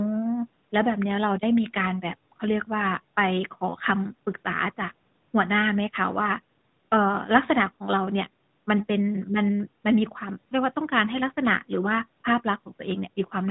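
Speech carried over a call path, with the lowest bass trimmed by the call's microphone processing and everything above 4 kHz removed by the AMR narrowband mobile codec, shows no technical fault.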